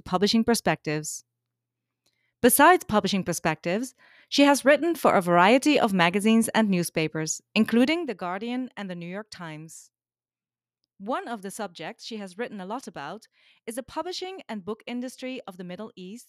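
A speech recording with some zipper noise between 7.72 and 8.12 s: the level drops by about 15 dB in coarse, unsmoothed steps, roughly seventy a second, so you hear fast ticking riding on the speech.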